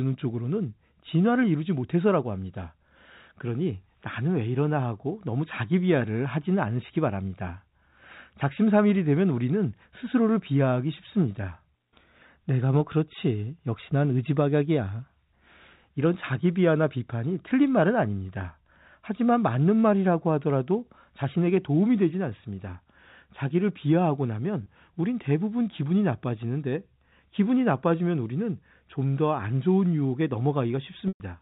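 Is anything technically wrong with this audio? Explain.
Yes. There are two brief dropouts from packet loss with pitch repetition. At 24.63 to 24.66 s the speech briefly holds a slightly buzzy, sustained tone, and from 31.08 to 31.20 s a longer hold fades toward silence before the speech returns. In each case packets went missing, about 30 ms in the first gap and about 120 ms in the second, which fits one lost packet and then roughly four. The receiver filled each hole by repeating the last pitch cycle, fading it over the longer gap.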